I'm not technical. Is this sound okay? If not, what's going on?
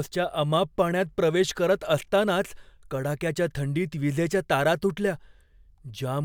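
Yes, this recording sounds fine; nothing in it jumps out as a problem, so you can relax about it.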